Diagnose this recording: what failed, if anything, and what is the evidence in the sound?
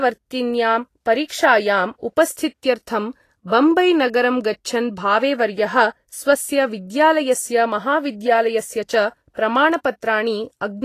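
Codec stage: the speech sounds hissy and grainy the whole way through, with nothing above 14.2 kHz, likely Vorbis compression at a low rate, around 34 kbps.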